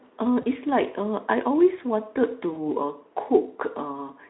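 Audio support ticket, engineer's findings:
VoIP packet loss concealed by the speech codec, 0.41–0.46 s and 2.53–2.60 s: each gap fits one lost 20 ms frame. The Speex decoder extrapolates the last pitch and filter, giving a brief buzzy or noisy, fading smear that lingers for tens of milliseconds after packets resume.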